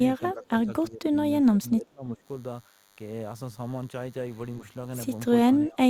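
DECT cordless phone buzz runs through the whole speech clip: a nearby DECT handset or base emits a radio burst every 10 ms that the audio circuitry rectifies, leaving a thin, steady 100 Hz buzz rich in harmonics, sitting roughly 25 dB below the talker.

Speech suppressed in double talk follows at 0.2 to 0.7 s, 0.9 to 1.16 s, 1.41 to 2.23 s and 5.46 to 5.82 s. The voice dips by around 10 to 20 dB, likely because an echo canceller mistook it for loudspeaker echo while both sides spoke.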